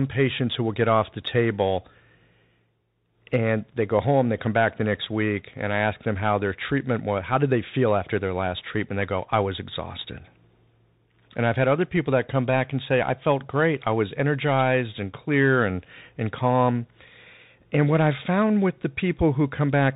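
From start to finish, the speech carries the sound of a Bluetooth CVSD headset codec. CVSD sends one bit per sample, only up or down, and keeps adjusting its step size. The band stops at 4 kHz, so the speech sounds narrow and boxy. Loud, bright sounds climb faster than the step can follow, and they distort. S sounds turn scratchy. A granular hiss sits underneath. The damage is plainly audible and fits a 64 kbps link.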